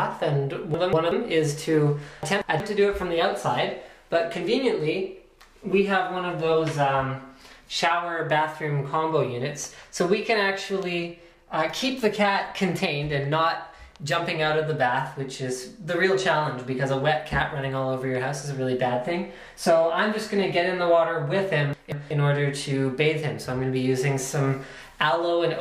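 At 0.74–1.12 s, 2.23–2.60 s and 21.73–22.11 s, chunks play out of order: a block of about 186 ms arrives one chunk late and follows its successor. Each swap leaves a brief jumbled passage with three hard joins.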